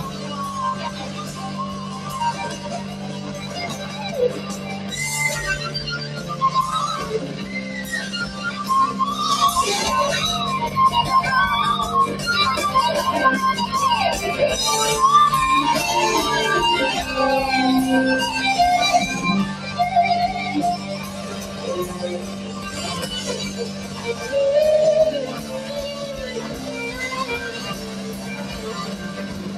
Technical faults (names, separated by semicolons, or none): noise suppressor applied to music or sounds; sound cut by the noise suppressor